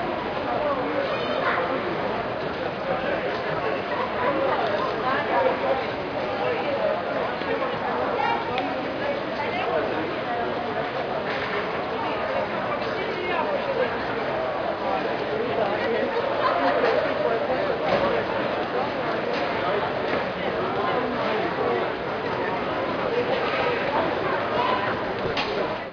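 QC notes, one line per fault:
No fault found.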